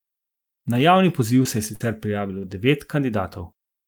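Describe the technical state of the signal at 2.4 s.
At 2.4 s the signal is inside a burst of packet loss running from about 2.38 to 2.45 s. Several packets in a row arrived too late or not at all, so the receiver stretched the last sound it had for about 49 ms and faded it out. A voiced stretch becomes a held buzz, and an unvoiced one a dying hiss. The audio then resumes about 40 ms further along, so that part of the speech is gone.

Just before this, from about 2.28 to 2.31 s, there is a short concealed packet loss. The gap there is much smaller. Only about 10 ms was synthesised from the preceding pitch or noise and blended back, and about 20 ms of real audio is missing. It comes across as a quick smear or wobble rather than a hold-and-fade. The burst is longer, and its fading continuation of the same sound is what sets it apart.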